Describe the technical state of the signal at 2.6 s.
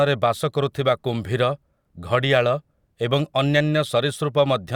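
At 2.6 s the audio is intact, with no technical fault audible at that moment.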